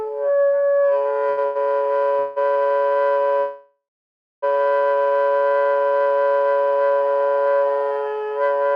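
A recording of everyday sounds with two kinds of fault. Twice, a late packet emptied the jitter buffer, causing a short stall from a late packet: the sound holds for 78 ms at 1.29 s and 99 ms at 1.45 s, then resumes unbroken. Later a call audio freeze, likely from packets held up in transit, stretches the audio into a fading buzz or hiss from 2.19 to 2.38 s and from 3.40 to 4.44 s, the second lasting about a second and ending in 580 ms of silence before the sound picks up where it stopped.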